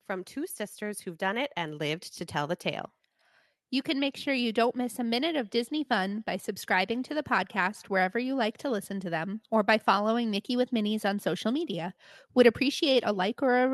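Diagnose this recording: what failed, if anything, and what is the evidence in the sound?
The failure is automatic gain rising, in the call processing stage. From 0.06 s to 2.94 s the speech and the background noise swell together, climbing by about 8 dB over nearly three seconds. The gain control judged the incoming level too low and raised its gain step by step, lifting everything at once. The audio then passes through the call codec, whose coding noise and a top end that stops around 12 kHz point to a super-wideband Opus setting.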